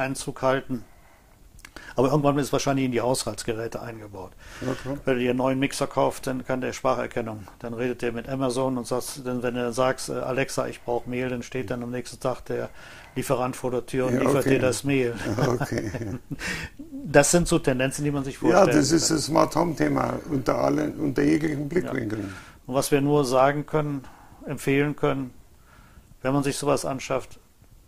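No faults are audible anywhere in the clip.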